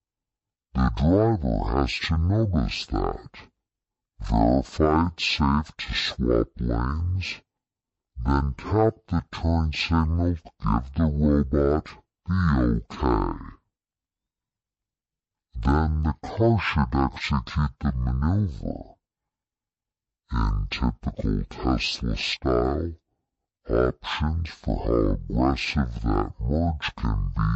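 Stereo read as mono affects the whole clip. The left and right samples of a stereo stream were taken one after another as though they formed a single channel, so every stereo frame became two consecutive samples. The speech therefore runs at half speed and sits a full octave, 12 semitones, below its natural pitch, sounding slowed and deepened throughout. A mirror image of the sound also shows up in the upper half of the spectrum.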